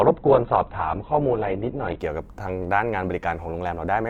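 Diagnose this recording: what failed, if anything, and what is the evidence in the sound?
What failed is the stream delivery, specifically an adaptive stream starting at a low bitrate. For the first 2.0 s the speech has nothing above about 4.4 kHz and stronger codec artefacts, which fits a very lean rung of roughly 8 kbit/s Opus. At 2.0 s the full band snaps in with no gap, consistent with a step up to about 64 kbit/s. The player opened cheap for a fast start, then switched up once it had measured the connection.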